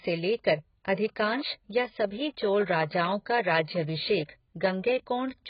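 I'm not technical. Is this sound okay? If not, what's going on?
No. The speech was likely squeezed hard by AAC compression throughout, which discards everything above about 5.1 kHz, leaving it dull, muffled and warbly.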